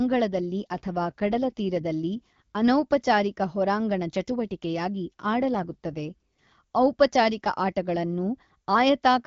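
From 0.36 to 2.60 s and again from 5.40 to 6.52 s, the speech turns rougher and more synthetic. These are AMR rate drops. The link adapts the wideband AMR codec downward, and the added coarseness fits a step from 12.65 to about 8.85 kbit/s, with fewer bits left for the vocal tract and pulse model. Bandwidth holds and there is no gap. Each time, the speech returns to the clearer HD Voice quality once the rate comes back up.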